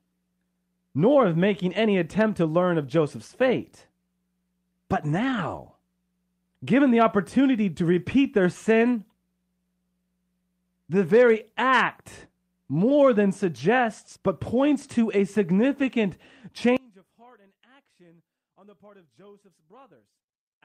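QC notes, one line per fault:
5.15–5.37 s, 11.34–11.36 s, 15.82–15.88 s: lost packet rebuilt from error correction. There are no gaps, but the first span (120 ms, which fits six 20 ms packets), the second just before "act more than suggests", and the third just after "but points to a" turn briefly rougher and noisier. The decoder is playing low-bitrate redundant copies in place of the missing packets.
16.77 s to end: one channel inverted, likely. In mono the centred speech drops by about 32 dB and nearly disappears, leaving a faint residue. Opposite polarity on one side makes the shared centre content cancel when the two channels are summed.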